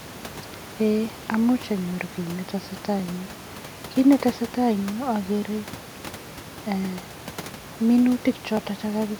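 At 8.57 s there is a single sharp click. It sounds like dropped samples. Likely, under a millisecond of the stream went missing, so the waveform jumps straight to a later value. Nothing audible is lost. The room noise sits about 19 dB below the speech.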